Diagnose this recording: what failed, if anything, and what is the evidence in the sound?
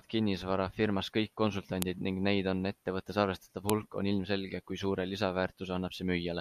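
Two sharp, loud clicks cut through the speech, one at 1.82 s just after "kinnisvara firmas kõik" and another at 3.70 s after "neid on ettevõttes arvestatav". Each is a brief snap unrelated to the surrounding signal level. This is a file header played as audio, introduced at the storage or file-joining stage: separate WAV segments were concatenated with their headers intact, so those few dozen bytes of metadata were decoded as samples at each joint.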